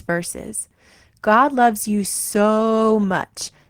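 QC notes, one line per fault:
2.54–2.59 s: short stall from a late packet; jitter buffer ran dry, last speech sound held about 18 ms, nothing lost, timing slips 18 ms later.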